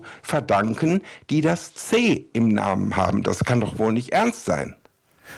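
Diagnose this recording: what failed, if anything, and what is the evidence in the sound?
Nothing in the chain failed: the speech runs without dropouts, clicks, distortion or level disturbances, and no stage from capture to playback leaves a mark on the sound.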